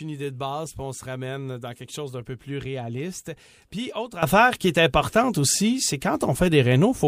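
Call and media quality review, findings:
Sudden gain jump at 4.23 s, lasting to end: speech and background noise step up together by about 14 dB. Likely an unramped digital gain change or bit shift.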